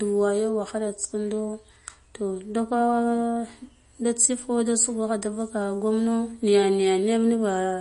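Throughout the speech there is nothing above about 10.6 kHz, and the sound is plainly watery, with swirling, chirpy sibilants and softened consonant attacks. This is likely MP3 compression at a low bitrate, around 40 kbps: the encoder drops the treble and lets weak frequency components flicker between frames.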